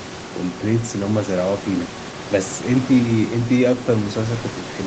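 No technical faults can be heard in this speech.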